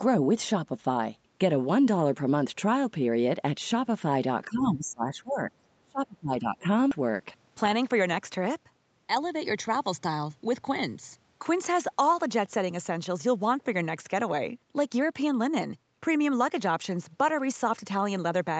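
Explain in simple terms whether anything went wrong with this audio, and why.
Several things went wrong. Most likely both sides talked at once and the echo canceller confused the voice with echo, giving speech suppressed in double talk: the voice dips from 4.46 to 5.51 s and nearly cuts out from 5.82 to 6.65 s. Then audio was thrown away to catch up, a skip ahead at 6.91 to 6.93 s that jumps past about 0.4 s of speech with no gap. Finally, a jitter buffer speed-up trimmed tiny slices from 7.01 to 8.08 s, so speech runs about 9% faster at the same pitch and sounds hurried.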